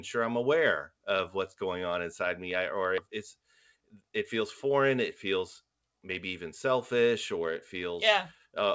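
A speech clip carried over a call path whose G.722 coding at 64 kbps leaves nothing above 8 kHz. At 2.98 s, right after "inside me i or", there is a skip ahead: roughly a second of speech is missing, and the two sides are spliced almost directly with no silence or concealment fill. That distinguishes it from a dropout, which leaves a gap or a smeared patch. The cause is a jitter buffer discarding queued audio, or audio lost in transit, while later packets were already waiting. From 3.07 to 4.92 s, leading into "it feels maybe even", a jitter buffer speed-up runs the speech at about 107% of normal rate, trimming around 150 ms in total by cutting pitch-period-sized pieces. The delivery sounds hurried but the pitch stays put, which separates it from a resampling or pitch-shift fault. It follows from the buffer holding more delay than its target.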